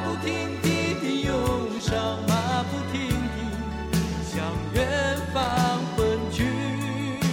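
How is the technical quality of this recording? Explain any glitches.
Two short bursts of loose connector crackle spoil the recording, at 1.74 to 1.97 s and 5.43 to 5.57 s. A dirty or worn contact rapidly making and breaking chops the signal into irregular scratchy crackle. The waveform shows jagged dropouts and spikes; the spectrogram shows scattered broadband vertical streaks.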